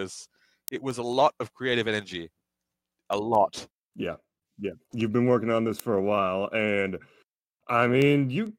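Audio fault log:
0.24–8.47 s, word clock ticks: around forty sharp ticks at a steady rate of roughly one every fifth of a second. Each marks the point where an unlocked receiver clock slips one sample against the sender, which fits a clock mismatch of roughly 100 ppm.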